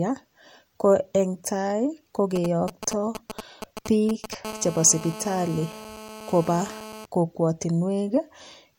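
GSM signalling bursts run from 2.36 to 4.35 s. A 2G handset near the recording gear is exchanging short control transmissions with the network, and the audio circuitry rectifies those radio pulses into audible energy. Over the speech comes a galloping dit-dit-dit of brief buzzes, each cluster pulsing at the 216.7 Hz burst rate, sitting roughly 10 dB below the speech.

GSM phone buzz follows from 4.45 to 7.06 s, once the phone settles into a call and transmits steady bursts 217 times a second. The rectified bursts now repeat without gaps at 216.7 Hz, giving a steady, raspy buzz rich in harmonics that bears no relation to the speech. It sits about 15 dB below the speech, lower than the signalling clusters before it. The evenly spaced harmonics of the 216.7 Hz fundamental make it sound harsh rather than like a smooth hum.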